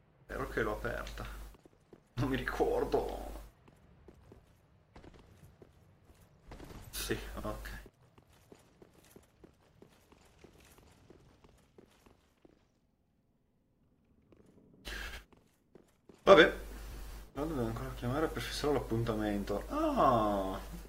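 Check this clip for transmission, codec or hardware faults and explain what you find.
Frames out of order occur three times: 7.34–7.45 s and 15.08–15.19 s, each swapping two 46.4 ms blocks, and 16.91–17.11 s, swapping two 92.9 ms blocks. Neighbouring frame runs decoded in swapped order produce a garbled flutter. Waveform and spectrogram show abrupt seams where content jumps backward, with no gap.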